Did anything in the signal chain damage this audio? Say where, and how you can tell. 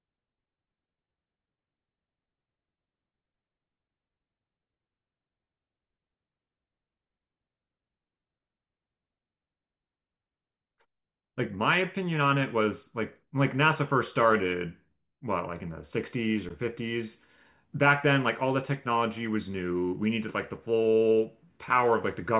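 No, nothing in the chain damaged this recording.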